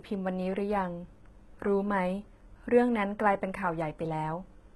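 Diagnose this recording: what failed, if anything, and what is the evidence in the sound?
The failure is at the codec stage, most likely HE-AAC compression, heavy throughout. Treble stops near 11.8 kHz, yet the speech's s sounds stay bright but gritty and lispy, which fits a bitrate around 16 kbps. Synthesized upper bands separate this from a plain low-pass filter's dulled treble.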